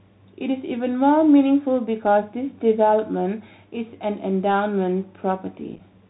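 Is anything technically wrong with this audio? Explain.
Yes. The speech has gone through a Bluetooth CVSD headset codec, the narrowband link used by headsets, at a rate consistent with 64 kbps. It encodes each sample as a single up-or-down bit, with a step size that adapts as it goes. Because the link is band-limited, nothing above about 4 kHz survives, and the whole clip sounds boxed-in. The damage is plainly audible: loud high-frequency energy outruns the step size and distorts, sibilants turn scratchy, and a granular hiss sits under the speech throughout.

Near the end, from 5.76 to 5.80 s, there is unconcealed Bluetooth headset packet loss. A handful of short voice packets between headset and phone never arrived, and the receiver filled the gaps with silence or an idle pattern instead of masking them. About 18.8 ms of audio is missing, spread in bits over roughly 37.5 ms, and the longest single gap is 7.5 ms. 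The result is a brief crackly, chopped patch with hard-edged dropouts, and the speech comes back momentarily quieter as the codec recovers.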